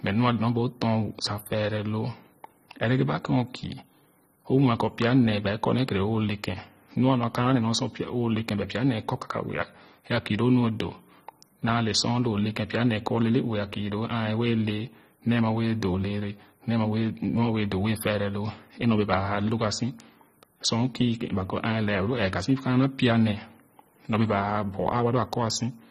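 From start to finish the speech sounds dull and smeared, with nothing above 14.5 kHz and a warbly, fizzy edge on sibilants. That's likely AAC compression, quantising the spectrum so coarsely that it fits a low bitrate of around 24 kbps.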